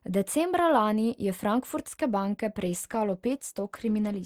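A call bitrate drop begins at 2.63 s, just after "je frankfurtske banke", and lasts to the end of the clip. The bandwidth estimate fell and the encoder was pushed from 48 kbps to 17 kbps, holding at that low rate for about 1.6 s. With so few bits, the speech is quantised more coarsely and the upper frequencies are trimmed away, so it turns muffled and rough and watery, and it does not recover before the clip ends.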